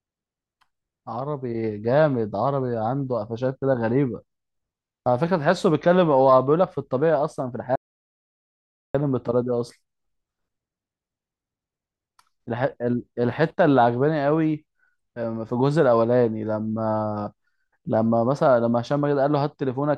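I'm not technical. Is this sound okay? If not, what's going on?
No. At 7.76 seconds the speech suddenly stops and there is dead, total silence until 8.94 seconds, about 1.2 seconds with not even background hiss. This is an audio dropout to silence, likely from the input briefly disconnecting, so that stretch is lost.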